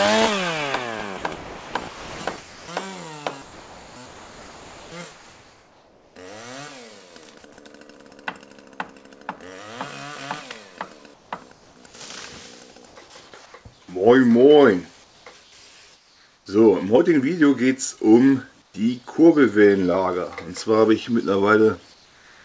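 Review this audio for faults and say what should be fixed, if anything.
Two things stand out. First, sound chopped by the voice detector, at 1.18 to 2.68 s and again at 3.42 to 6.16 s. In each stretch the real audio keeps dropping out and a smooth synthetic hiss fills the holes, about 1.06 s of replacement in the first and about 2.44 s in the second. That's likely the sender's voice detector toggling transmission on and off and the receiver patching the gaps with comfort noise. To prevent it, turn off discontinuous transmission or make the detector less aggressive, with a longer hangover so quiet passages aren't cut.

Second, comfort noise in place of the background, in five pauses: 11.14 to 11.94 s, 12.86 to 13.54 s, 15.04 to 16.46 s, 18.62 to 18.74 s, and 21.94 s to the end. In each one, the real room sound is partly swapped for a smoother generated noise, from about 0.12 s up to 0.8 s at a time. 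In the last two pauses the background sits about 41 dB and 34 dB below the loud parts, and the fill comes in about 4 dB lower, so you hear the floor dip. The band tops out at 8 kHz, which fits the G.722 call path. To prevent it, disable DTX on the sending side so the genuine background is always transmitted.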